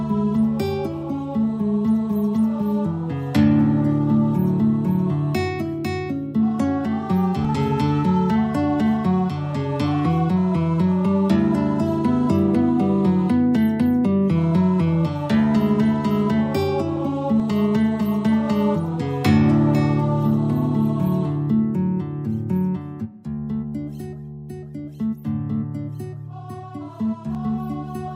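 Likely audio missing between chunks: roughly 50 ms dropped at each 10-second boundary, butting the sound together into abrupt skips at 7.45, 17.40 and 27.35 s.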